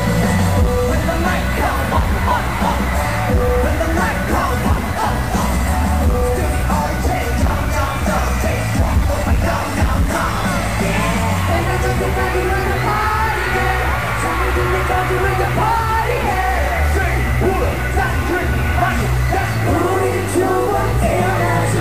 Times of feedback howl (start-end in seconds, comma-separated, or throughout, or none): none